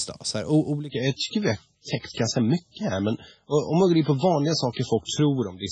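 At 0.89 s, an adaptive stream at a lower bitrate takes over until the end. The switch is abrupt but gapless, unlike a dropout, and removes treble above 7.6 kHz.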